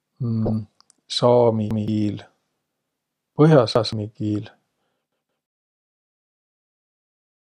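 From 0.46 to 0.52 s comes DAB burbling. Bit errors slip past error correction, so wrong samples put brief blips of noise in single sub-bands.

Repeated buffers follow at 1.71 to 1.88 s and 3.76 to 3.93 s. Late audio makes a 170 ms piece replay with a hard join, which fits an 8192-sample buffer. At 5.12 to 5.46 s it sounds three times, within the fade-out.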